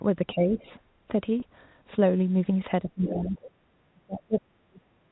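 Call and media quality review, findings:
Speech suppressed in double talk. Talker level dips at 0.34–0.65 s (about 10 dB), 2.84–3.30 s (about 20 dB) and from 3.93 s to the end (about 40 dB, nearly a full second pulled down). The likely cause is the echo canceller's double-talk handling mistaking the near talker for loudspeaker echo during overlap. Unlike background gating, the voice itself is attenuated, and the drop deepens with each overlap.

Packet loss with pitch repetition. At 1.40 s, a brief held, buzzy sustain of about 20 ms, which fits one lost 20 ms packet. The receiver's concealment repeated the last pitch period across the gap. It is distinguished from double-talk suppression by its length and character: the sound is prolonged and tonal, not turned down, and no other voice is overlapping.

Other side's voice leaking through. A second voice sits about 10 dB under the talker at 3.04–3.51 s. 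The likely cause is residual loudspeaker echo the canceller failed to remove from the microphone signal. It overlaps the 2.84–3.30 s suppression, so the canceller is both turning the talker down and passing echo. That separates it from ordinary crosstalk.

Background gated by the echo canceller. At 3.58–3.65 s, about 70 ms, the room sound drops about 7 dB, then recovers. The canceller clamped the microphone while the loudspeaker was still active, just after the leaked echo. It is told apart from double-talk suppression because only the background ambience dips, briefly, with no talker attenuation.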